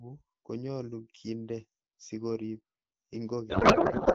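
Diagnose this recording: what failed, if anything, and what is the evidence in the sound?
Codec payload misread, at the codec stage. From 3.50 s to the end, the speech turns into garbled noise and warble. The decoder is likely reading octet-aligned AMR frames as bandwidth-efficient, with every field misplaced.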